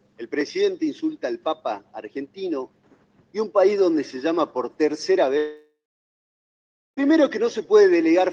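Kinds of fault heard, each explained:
Long network dropout: From 5.37 s to 6.99 s the audio stops arriving, likely because packets were lost on the network for about 1.6 s. The receiver stretches the last sound into a fading buzz or hiss for roughly a third of a second. About 1.2 s of near-silence follows. Playback then resumes later in the material, with the missing stretch simply gone. Around the gap, the Opus call path cuts off content above 12 kHz.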